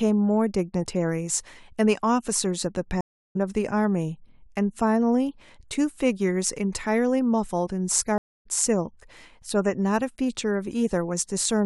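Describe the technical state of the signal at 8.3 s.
At 8.3 s the speech drops out for a stream reconnect, from 8.18 to 8.47 s. The connection broke, leaving about 270 ms of silence. A fresh decoder restarts, and the speech resumes roughly 0.2 s further on.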